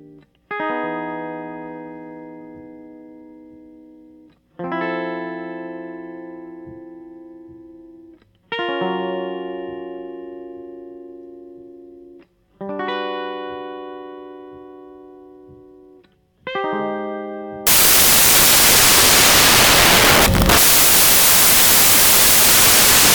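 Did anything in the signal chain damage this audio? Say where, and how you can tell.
Yes. At about 17.67 s the music gives way to loud, harsh broadband noise that runs to the end of the clip. That's samples built from the wrong bytes, a sample-format conversion fault. The reader is misassembling each sample, so the jittery low bits end up as the big part of every value.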